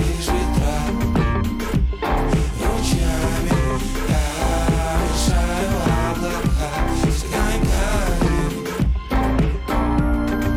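No technical faults can be heard anywhere in this audio.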